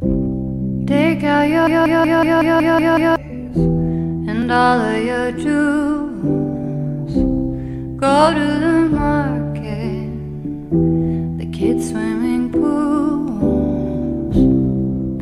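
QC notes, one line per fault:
1.67–3.16 s, system hang loop: a single fragment of about 186 ms repeats exactly eight times, giving a rhythmic machine-gun stutter at roughly 5.4 Hz before normal audio resumes. The playback side stalled while the output hardware kept cycling through its ring buffer, replaying the same stale block. The loop length fits an 8192-sample buffer. Roughly a second and a half of the original audio never reaches the output.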